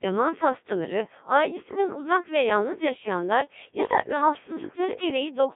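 Speech, carried through a Codec 2 vocoder for the whole clip. The voice is rebuilt from sine waves using only pitch, voicing, level and a spectral envelope. It sounds robotic and buzzy, with heavy damage, in a band of 150 Hz to 3.6 kHz. The coarseness fits a rate near 1.3 kbit/s. From 4.01 to 4.21 s, just after "ve yalnız yaşayanlar ya", bit errors on digital voice radio strike. Corrupted frame data makes the voice jump in pitch, level and tone, breaking into warbling gibberish. The span fits about four frames, at an error rate of several percent.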